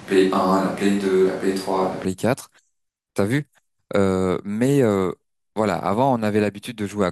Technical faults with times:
0.00-2.05 switch to a distant microphone

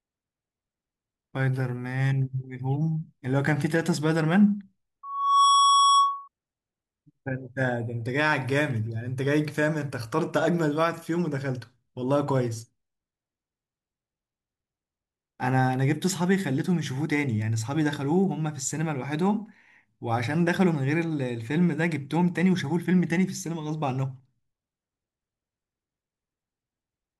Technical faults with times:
5.03-6.28 loudspeaker feedback squeal

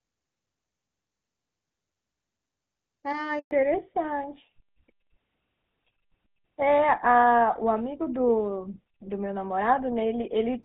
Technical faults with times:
3.39-3.51 handover gap
3.51-10.65 fallback to narrowband

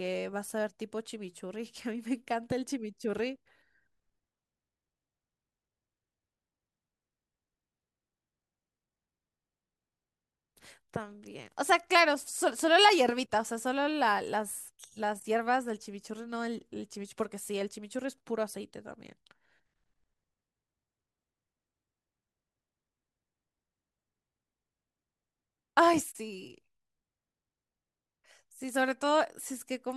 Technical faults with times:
none

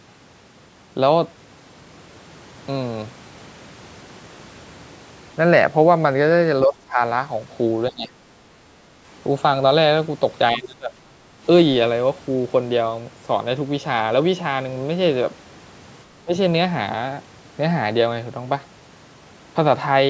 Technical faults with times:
6.66-6.99 speech suppressed in double talk
7.90-8.11 speech suppressed in double talk
10.57-10.93 speech suppressed in double talk
11.21-11.43 background gated by the echo canceller
16.22-16.34 speech suppressed in double talk

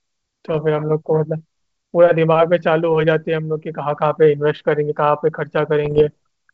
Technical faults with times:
0.51-0.60 bit errors on an ADPCM link
5.84-6.03 bit errors on an ADPCM link

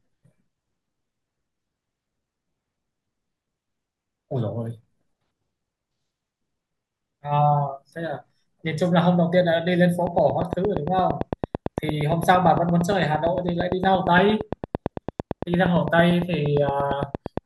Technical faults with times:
10.07-17.38 train of clicks

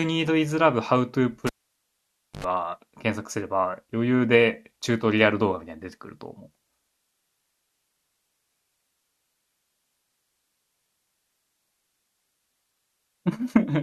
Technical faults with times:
1.47-2.44 cable pulled and plugged in

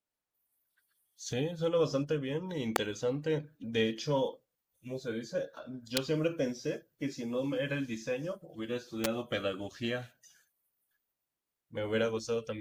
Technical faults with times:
2.76 electrical switching spike
5.97 electrical switching spike
9.04 electrical switching spike

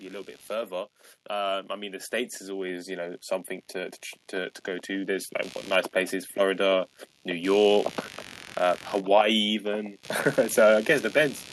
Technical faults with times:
0.00-11.53 computer activity noise
0.47-6.03 automatic gain rising

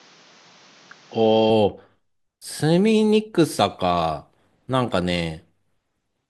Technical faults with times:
0.00-1.50 input switched to a poorer device

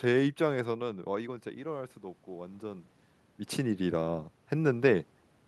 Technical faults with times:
0.52-2.94 automatic gain rising

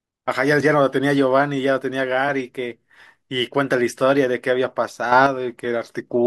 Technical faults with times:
5.12-5.26 sudden gain jump

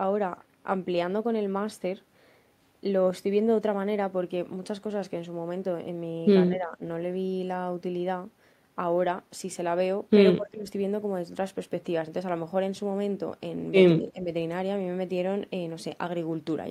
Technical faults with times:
6.50-6.82 speech suppressed in double talk
10.36-10.67 speech suppressed in double talk
13.97-14.29 speech suppressed in double talk

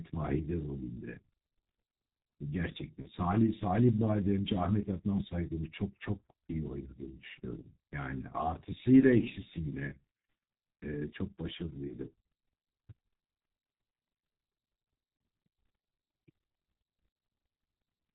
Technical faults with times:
0.00-18.15 G.723.1 codec
3.02-3.09 VoIP packet loss concealed by the speech codec
11.87-11.98 VoIP packet loss concealed by the speech codec
15.17-15.20 VoIP packet loss concealed by the speech codec
17.12-17.15 VoIP packet loss concealed by the speech codec

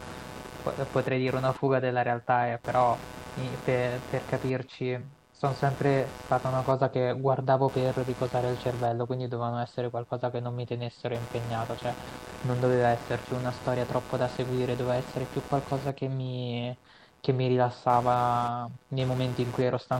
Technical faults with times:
0.00-19.99 computer activity noise

